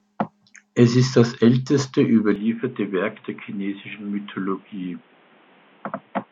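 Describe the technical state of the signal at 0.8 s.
At 0.8 s the speech signal is intact, with no dropout, clipping, distortion or other fault audible at that moment.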